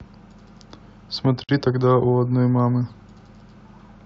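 This speech clip was encoded in separate pieces and joined without trimming each encoder's leading delay and final-frame padding, leaving a gap at a join of encoded pieces: a gap of about 52 ms from 1.44 to 1.49 s, with smeared edges, before the speech resumes.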